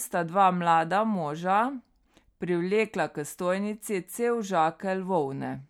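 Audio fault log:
No audible faults found.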